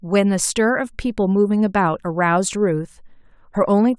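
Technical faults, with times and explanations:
No technical faults can be heard, so there are no times or explanations to give.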